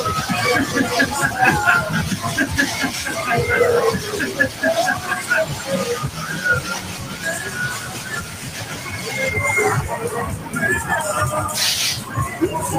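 A noise suppressor applied to music or sounds runs throughout, treating steady tones and tails as noise and swinging the level by roughly 10 dB, so the sound pumps. Sound cut by the noise suppressor follows at 5.53 to 5.69 s, 6.11 to 6.44 s, 6.78 to 7.25 s, 7.43 to 7.58 s, 7.74 to 9.07 s and 10.39 to 10.55 s. Held parts sink by about 5 to 7 dB and decays are clipped short.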